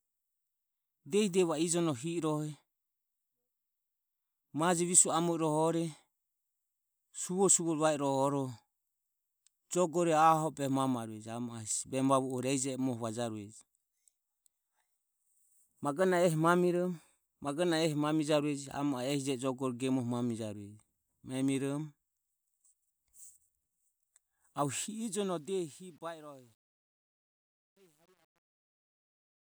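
From 24.82 s to the end at 29.43 s, the fade-out suffers truncation distortion: the gain stage keeps too few bits and adds no dither, which fits a 10-bit word length. As the speech sinks toward the smallest step, the waveform collapses into coarse staircases, so from 25.6 s onward the tail turns gritty.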